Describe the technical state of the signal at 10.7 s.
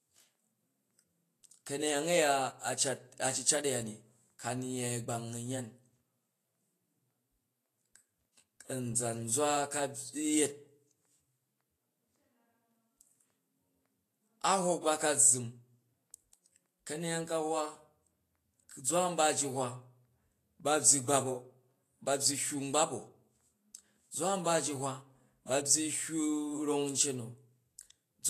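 At 10.7 s the speech shows the same fault heard across the whole clip: low-bitrate audio saved at a high bitrate. Nothing is present above 14.2 kHz, so the top of the spectrum is empty. The lingering coding artefacts fit a first pass through a low-rate codec such as Vorbis. The file was likely re-encoded later as high-rate MP3. That second encoding kept the damage but could not restore what was removed.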